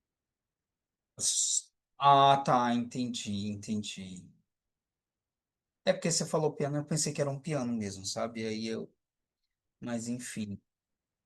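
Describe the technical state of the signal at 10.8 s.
At 10.8 s the signal is intact, with no audible fault at that moment.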